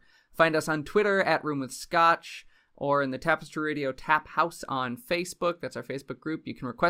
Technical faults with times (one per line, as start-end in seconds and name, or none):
none